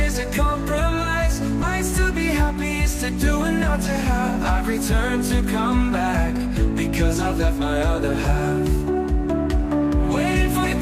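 Two short bursts of damaged data in a compressed stream break into the sound, from 1.58 to 1.64 s and from 10.59 to 10.65 s. Each is a brief glitch where corrupted frames confuse the decoder until it resynchronises. On a spectrogram each shows as a broadband smear. On the waveform it shows as a discontinuity.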